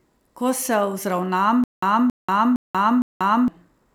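From 1.64 s to 3.48 s the speech breaks into a stutter with silent gaps. A burst of 274 ms plays, then drops to dead digital silence for 186 ms, and the same burst comes back four times on an even 461 ms cycle. The likely cause is a stalled player or stream that replayed its last fragment at each retry and then ran empty, so the speech that belonged in that stretch is lost.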